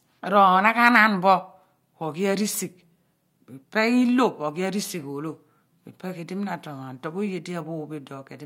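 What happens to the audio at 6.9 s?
Nothing goes wrong at 6.9 s; the speech carries on intact through that moment, with no dropout, click or distortion to be heard.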